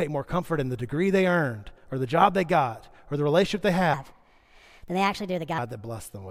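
A section at the wrong speed runs from 3.94 to 5.58 s, just after "or the relationship they". That stretch was likely played against the wrong clock, at 1.32 times its recorded rate, so the speech turns hurried and rises about five semitones together before dropping back.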